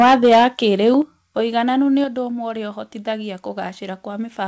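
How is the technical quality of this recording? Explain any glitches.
The recording has two recurring problems. The start is distorted by microphone overload, and the level then drops in three sudden steps. The speech is band-limited by the call codec, with nothing above 8 kHz.

Microphone overload is heard from 0.00 to 0.45 s, about 6 dB over the limit, with roughly 15% of samples flattened. A shorter burst comes at 0.87 to 0.89 s, about 1 dB over, just before "ũigananĩru nĩ ũndũ ũmwe". The likely cause is an input volume set too high, so peaks exceed the converter's ceiling. Their tops are sliced off, and the loud syllables turn harsh and crackly.

The microphone volume stepped down at 0.02 s, about 2 dB. It stepped down again at 1.02 s, about 6 dB, just before "ũigananĩru nĩ ũndũ ũmwe". A third step came at 2.04 s, about 4 dB, between "ũigananĩru nĩ" and "ũndũ ũmwe ũrĩa ũhotithagia". 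This is likely the call software reacting to the clipping by cutting the device's input gain in single jumps. The voice and the background drop together, abruptly, rather than fading.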